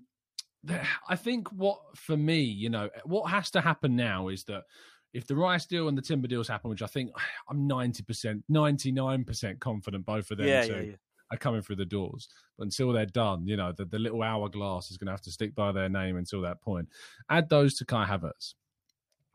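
No technical faults are audible anywhere in the speech.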